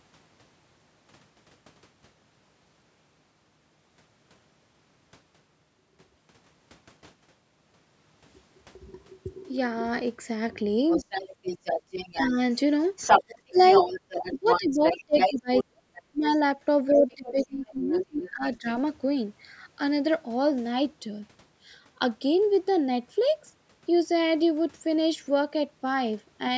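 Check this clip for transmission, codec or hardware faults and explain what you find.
Two related faults appear between about 10.9 and 18.8 s, both typical of a speakerphone-style call. The audio has been through call microphone processing and carries nothing above 8 kHz.

Other side's voice leaking through, at 10.89–12.59 s, 12.96–16.38 s, 16.88–18.3 s and 18.68–18.75 s: a second voice sits under the speech, roughly 10 dB down, then about as loud, then fainter, then a faint scrap. The likely cause is loudspeaker playback the echo canceller failed to remove from the microphone.

Speech suppressed in double talk, at 12.27–12.38 s, 13.19–13.57 s, 14.23–16.25 s and 16.9–18.67 s: the main voice dips slightly, then drops sharply, deepest at about 35 dB near 14–16 s, then about 20 dB. This is likely the canceller turning everything down while both sides talked.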